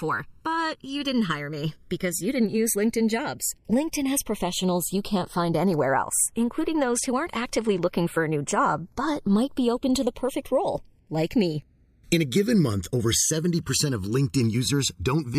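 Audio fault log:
Throughout: channels drifting apart. The gap between left and right in this speech creeps up to about a millisecond by the end, which fits two clocks around 100 ppm apart. Summed to mono, the comb notches sweep slowly, giving a flanging swirl.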